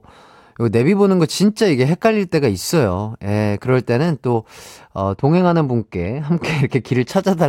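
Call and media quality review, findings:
De-emphasis applied wrongly, 5.02 to 7.11 s. Speech turns dull and muffled. Smooth treble roll-off, about 11 dB down at 10 kHz relative to 1 kHz. Treble-cut filter meant to undo pre-emphasis, run on unemphasised audio or run twice.

Dulling runs from 5.02 s through 7.11 s. Check de-emphasis flags and filter chain in that segment's processing path.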